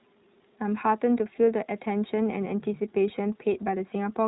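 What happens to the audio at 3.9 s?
At 3.9 s, as across the whole clip, the speech runs through the iLBC codec, which codes each frame's excitation independently, fitting 20 ms frames at about 15.2 kbps. Nothing above 3.8 kHz survives, so the speech sounds muffled and slightly rough and synthetic.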